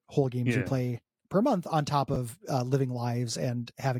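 A speech recording carries two digital transport faults. At 2.14 to 2.16 s, between "per month on top" and "uh living", chunks are out of order: a 10 ms block of audio was delivered or written one chunk late, so it plays after the block that should follow it. No audio is lost, but the two swapped blocks create three abrupt joins inside 20 ms, heard as a brief jumbled flicker. At 3.01 s, just after "uh living", a bit error spike occurs: a single flipped bit in one sample makes its value leap by a power of two and snap straight back. The result is one sharp, broadband tick that has no relation to the surrounding speech.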